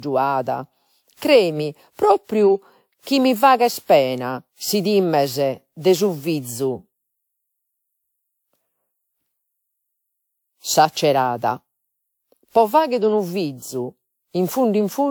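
From start to finish the speech has a swirly, smeared quality, hollow, with consonant attacks softened and blurred; the band extends to about 20.1 kHz, so the damage is not simple bandlimiting. This points to generation loss, likely from roughly seven successive decode and re-encode passes through a WMA-type codec near 128 kbit/s. Each pass requantised the audio on a shifted frame grid, stacking noise beyond what one encode would leave.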